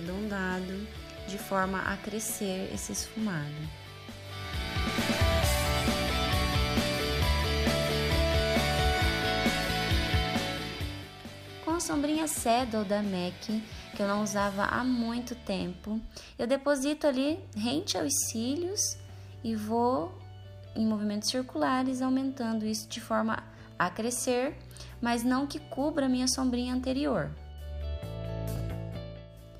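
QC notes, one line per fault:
28.56–28.60 s, chunks out of order: a 20 ms chunk plays after the chunk that should follow it. Nothing is lost, but three hard joins give a brief jumbled moment. The three joins fall within 40 ms.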